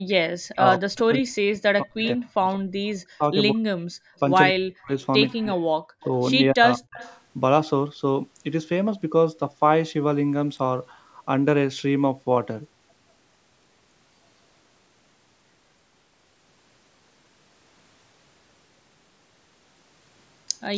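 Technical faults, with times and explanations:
0.0–3.64 s, 4.49–4.91 s, 5.33–5.74 s and 6.51–6.99 s, speech suppressed in double talk: the voice sinks by roughly 40 dB, likely the canceller ducking it while the far side talks.
3.92–4.16 s, background gated by the echo canceller: room sound drops about 31 dB for a moment while the loudspeaker plays, then comes back once the canceller releases.
6.66–7.16 s, echo leak: a faint delayed copy of the voice trails 179 ms behind, about 20 dB down, likely loudspeaker pickup the far-end canceller missed.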